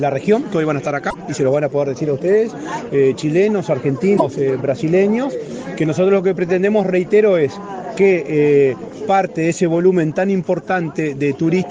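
At 1.09 to 1.15 s and again at 4.17 to 4.22 s, the audio skips forward, and each join is followed by about 50 ms of garbled audio, roughly two 24 ms frames' worth. The likely cause is a broken MP3 bit reservoir: after dropped frames, the next frames fetch their borrowed data from the wrong bytes. On a spectrogram each event shows as a narrow vertical disturbance, and the waveform shows a jagged discontinuity at the cut.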